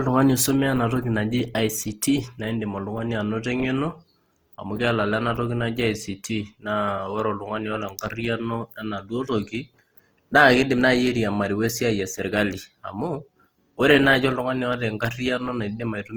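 A speech clip whose encoding was likely squeezed through Opus compression in its music mode, at a rate that fits about 24 kbps. Bandwidth reaches 20.2 kHz, but the starved bands are refilled rather than left empty, so throughout the speech turns grainy, rough and noisy.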